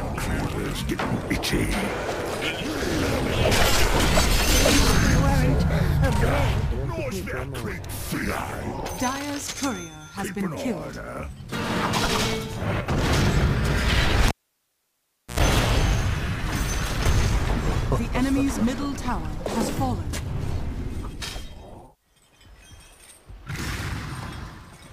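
Cable pulled and plugged in, 14.28–15.40 s: the live lead pops out, leaving 1.06 s of near silence, then an 85 ms burst of 60 Hz mains buzz as the tip touches, before a second pop.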